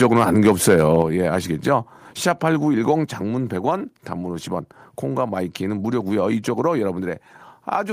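Speech, with two faults in the first second. From 0.02 to 1.02 s there is microphone overload. The loudest syllables sound harsh and crackly. Their peaks are flattened, as if the signal were pushed about 6 dB past the converter's ceiling. Only a small share of the audio is actually cut, roughly one or two percent of it. The likely cause is an input volume set too high, so the tops of the waveform are sheared off. At 1.02 s the microphone volume steps down. Speech and background both drop abruptly by about 4 dB. The level does not fade. It falls in a single step right after the distorted stretch. That pattern suggests call software reacting to the clipping by cutting the device's input volume at once. The drop ends the crackle.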